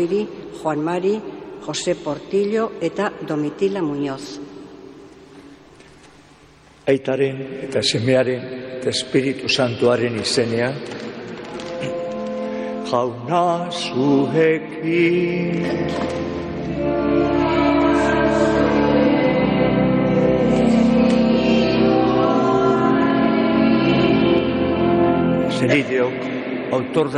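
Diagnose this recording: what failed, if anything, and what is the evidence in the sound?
Nothing stood out on listening that would point to a failure at any stage of the chain.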